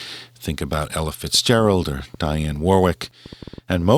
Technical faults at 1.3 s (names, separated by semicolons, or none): train of clicks